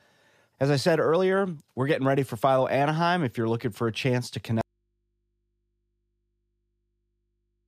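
At 4.61 s, just after "for a chance to", the speech cuts out abruptly. An audio dropout to a faint residue follows: only hum, roughly 50 dB down, remains to the end. Likely a lost signal with the input still live.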